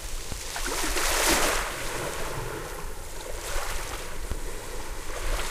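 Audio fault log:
0.32 s and 4.32 s: DC step. The waveform's zero line jumps suddenly by about -18 dBFS, then drains away as though through a 20 Hz high-pass. Each abrupt shift and its slow recovery is heard as a brief low thump, while the underlying sound carries on unchanged.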